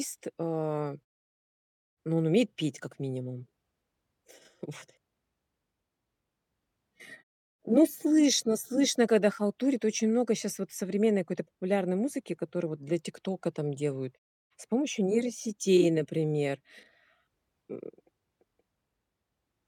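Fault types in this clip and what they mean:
No faults in this speech.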